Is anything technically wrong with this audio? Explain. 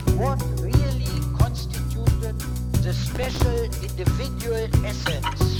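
Yes, there's a burst of processor overload crackle from about 3.12 to 3.42 s. The machine couldn't finish its small audio buffers, which sound like roughly 5 ms each, in time, so a dozen or more deadlines slipped in a row. Each miss got filled with a repeat of stale audio, and those hard-edged chunks stack into a gritty, tearing crackle riding on the sound. It clears up once the load drops.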